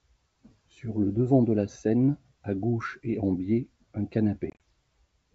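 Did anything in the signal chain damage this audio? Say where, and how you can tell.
Yes. Just after "et en biais un", from 4.50 to 4.62 s, the speech breaks into several hard-edged silent gaps, about 70 ms lost in total, scattered over roughly 100 ms, with the longest single hole about 30 ms. That pattern points to roughly seven short packets dropped on the network. This is packet loss on an ADPCM call. The G.722 decoder's adaptive predictor and step size drift from the sender's, so the speech returns slightly distorted after each gap before it settles.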